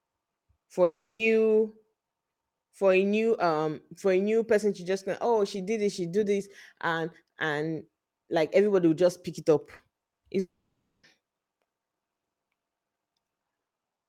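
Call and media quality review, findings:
Long network dropout, 0.83 to 1.22 s: likely a network stall, with about 360 ms of audio never delivered. The jitter buffer extends the last sound as a fading buzz, then about 260 ms of silence, and the audio resumes with the gap dropped. Long network dropout, 10.39 to 11.06 s: same failure, larger. About 640 ms lost, a short fading fill, then about 550 ms of silence before the audio returns further on.

Short concealed packet loss, 9.75 to 9.82 s, after "just pick it up": about 40 ms missed decoder deadline. Loss concealment extrapolates the preceding sound, then crossfades back, leaving a brief smear or wobble. Short concealed packet loss, 10.07 to 10.14 s, also after "just pick it up": another 40 ms hole, same patch-over, audible as a short smear or wobble just ahead of the second dropout.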